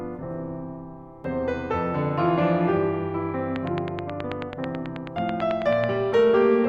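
Music with a train of clicks from 3.56 to 5.85 s: about twenty near-identical ticks, evenly spaced at 9.2 per second, standing well above the music. That steady rhythm sets it apart from random crackle, and it is likely caused by interference or a faulty connection.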